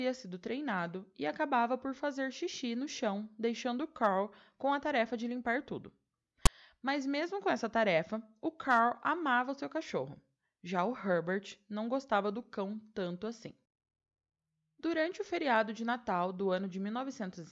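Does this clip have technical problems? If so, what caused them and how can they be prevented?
Yes. At 6.46 s, file tags played as audio: a block of text metadata was decoded as samples, producing a brief, hard-edged rasp of static pushed off-centre. Prevention: make sure the decoder skips tag blocks rather than passing them through as audio.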